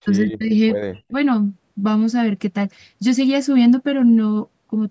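From 0.0 to 0.53 s, and again from 0.89 to 1.13 s, the talker's level collapses, falling by roughly 40 dB at its deepest and leaving the speech chopped and nearly gone for about half a second, then for a shorter stretch. This is speech suppressed in double talk, likely caused by the echo canceller mistaking near-end speech for loudspeaker echo while both sides talked and attenuating it. The call's microphone processing, with nothing above 8 kHz, continues through these gaps.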